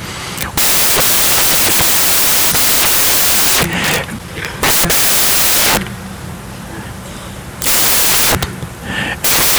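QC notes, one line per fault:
Throughout: samples built from the wrong bytes. Loud, harsh white noise runs through the speech, because misassembled bytes turn fast-changing low bits into each sample's large part.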